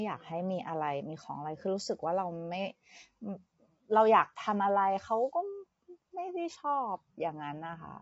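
Speech with low-delay AAC compression running the whole way through: rough, grainy harmonics and nothing above 7.8 kHz, likely AAC-ELD squeezed to around 24 kbps.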